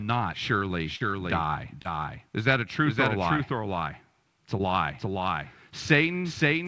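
From start to finish the speech is heard twice: a doubled audio track, with a full-band copy about half a second behind at roughly equal level. It is likely two copies out of step, not echo, since it has no decay or room colour.

Short concealed packet loss comes at 0.96 s, at 1.82 s just after "surely die", and at 4.58 s. Each gap of a few hundredths of a second was filled by extending the preceding sound, so it is heard as a brief smear or wobble rather than the silent hole of a true dropout.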